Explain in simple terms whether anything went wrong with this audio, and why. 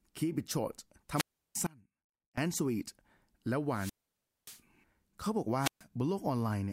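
Three times the speech briefly rises into a hiss, drops to near silence, then comes back: from 1.14 to 1.56 s (silent for about a third of a second), from 3.70 to 4.61 s (about 0.58 s) and from 5.58 to 5.85 s (about 0.13 s). This is a wireless microphone squelch dropout. The radio link from the microphone weakened, and the receiver muted its output rather than pass the static through.

Between 1.67 and 2.38 s, just after the first of those, the speech cuts out abruptly for about 0.71 s and leaves only a faint trace of sound far below the normal level. This is an audio dropout to a faint residue. The wanted signal was lost, most likely somewhere along the connection, while the equipment after the break kept running and carried only that faint leftover.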